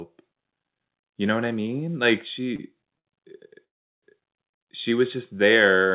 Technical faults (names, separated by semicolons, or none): short stall from a late packet; call audio freeze